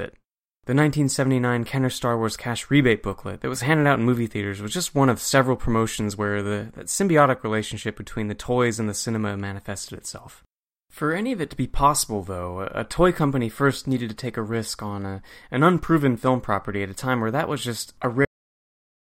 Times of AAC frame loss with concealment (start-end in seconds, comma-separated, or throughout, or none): none